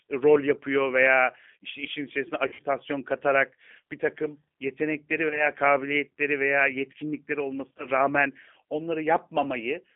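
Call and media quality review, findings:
G.729 codec, throughout: 8 kbit/s speech coding, band held to about 200 Hz to 3.5 kHz; plainly rough, synthetic texture from pulse-based excitation rebuilding.

VoIP packet loss concealed by the speech codec, 2.47 to 2.62 s (after "veya işte işin içerisine"), 5.29 to 5.47 s (after "katarak bir takım yetenekleri"), 7.78 to 7.86 s (after "kabiliyetleri veya yetkinlikleri"): fading extrapolated sound, buzzy tone or coloured noise. The first gap is worst, about 100 ms missing over 120 ms, with runs up to 50 ms. Recovery is weak because each frame builds on the last.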